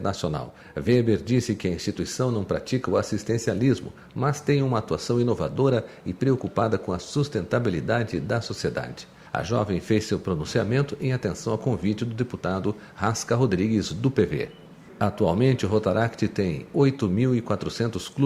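From 0.18 to 18.11 s, faint clock slip clicks tick about every 0.15 s, likely from unsynced clocks dropping or repeating single samples; thin, evenly spaced vertical spectrogram lines.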